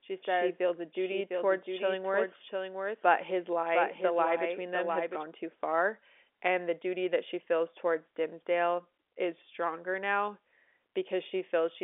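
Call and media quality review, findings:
Doubled audio track, 0.0–5.24 s: speech repeated about 0.7 s late, roughly 5 dB down, dry, no room colour, already present at start, cuts off abruptly just before "too far and the". Likely cause: second capture path or misaligned edit.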